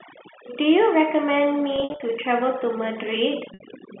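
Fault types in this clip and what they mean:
Overdone noise removal: The noise reducer was pushed too hard, so any frequency band sitting close to its idea of the background gets pulled way down or shut off entirely. It runs the whole length of the speech. Between phrases the room drops to near silence with little twinkling specks, and the quieter parts of the voice get eaten along with the noise.
Packet loss with pitch repetition: Chunks of audio went missing and the receiver filled each hole by looping the last pitch cycle and fading it out. From 1.76 to 2.00 s about 160 ms is lost, scattered over 240 ms, with the longest run at 60 ms, so you hear a stutter of brief held, buzzy bits. A second 60 ms gap at 3.54 s sounds like a short buzzy hold before the speech cross-fades back in.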